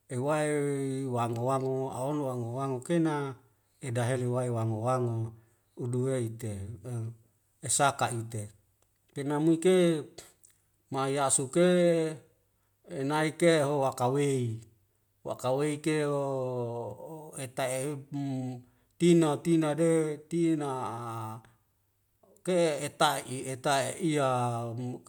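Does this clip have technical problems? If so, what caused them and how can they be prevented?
No, nothing in this speech clip points to a technical fault, so there is nothing to trace or prevent.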